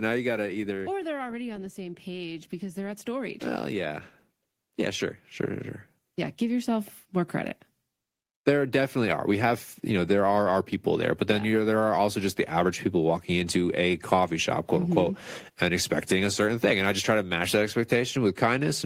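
Right from the start, 0.05 to 1.82 s, you get automatic gain falling: the AGC decided the input was too hot and backed its gain off gradually, by about 10 dB. So the speech opens loud and then sinks, and the background sinks right along with it, which is the giveaway that it's the gain stage and not the talker easing off.

Then, from 1.75 to 4.07 s, there's automatic gain rising, about 7 dB, as the AGC decides things are now too quiet and creeps the gain back up. Voice and room noise swell together over a couple of seconds. It happens again after "yeah sure sure sure", from 6.15 to 7.61 s, this time by about 4 dB, a gentler lift of the speech and its background together over roughly a second and a half.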